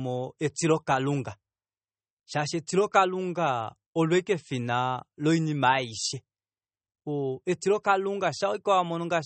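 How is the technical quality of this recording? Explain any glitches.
The technical quality is poor: MP3 compression damage is plainly audible across the whole speech clip. The encoder, likely short of bits at a rate that fits about 32 kbps, removes everything above 8.4 kHz and drops weak frequency lines that flicker between frames. The result is dull, watery, swirling speech with metallic chirps on s sounds.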